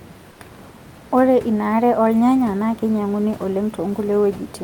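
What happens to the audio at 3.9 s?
Nothing goes wrong at 3.9 s: the speech continues intact, with only the room noise of the recording space audible underneath, about 23 dB below the voice.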